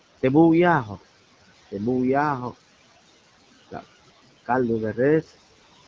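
Throughout the speech, noise suppressor artifacts pull the room noise down by about 19 dB between phrases and let it rise under them. Unlike a noise gate's hard on-off cut, this dips separate frequency bands frame by frame.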